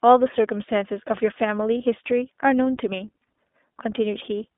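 The speech throughout sounds thin, boxed-in and a little rough and synthetic, with no low bass and nothing above about 3.6 kHz. The band runs from roughly 250 Hz to 3.6 kHz. This is the iLBC codec at work. It is a narrowband VoIP coder that codes each frame's excitation independently, and its damage here is plainly audible. The character fits its 20 ms, 15.2 kbps mode. From 1.78 to 1.81 s there is a brief held, slightly buzzy vowel-like smear where the speech should continue. These are lost iLBC frames, amounting to a single missing 20 ms frame. The decoder filled the gap by repeating the last pitch cycle blended with noise. Because each iLBC frame stands alone, the speech recovers cleanly right after the gap.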